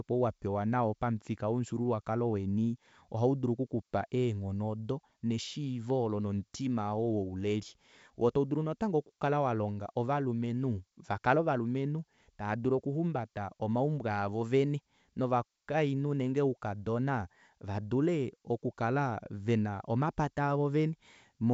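Nothing stood out on listening to this speech, which comes through G.722 wideband telephone coding at 64 kbit/s with no content above about 7.7 kHz.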